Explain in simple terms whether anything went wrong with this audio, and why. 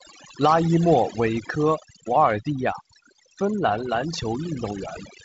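Yes, this speech has overdone noise removal from start to finish. The background sinks to near silence with twinkling specks. That flickering, rather than the steady dullness of a telephone-style top cut above 7.7 kHz, marks aggressive noise suppression.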